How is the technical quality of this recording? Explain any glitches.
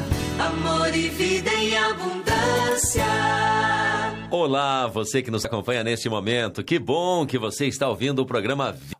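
The recording has one glitch, right at the end. At 8.92 s there is damaged data in the compressed stream. Corrupted bytes made the decoder misread a frame and lose sync, producing a brief glitch.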